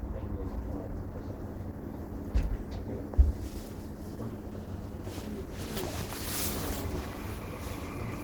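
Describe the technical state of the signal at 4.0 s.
Opus compression is present at 4.0 s and throughout the whole clip. The damage is plainly audible. Tonal parts of the sound turn grainy, rough and noisy rather than swirling, and the lower range takes on a muffled, hoarse character. This is likely the encoder filling starved bands with folded or noise content, which fits a bitrate near 16 kbps in its hybrid mode. The bandwidth stays full, reaching about 20.1 kHz.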